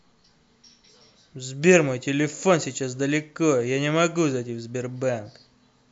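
No faults are audible anywhere in the speech recording.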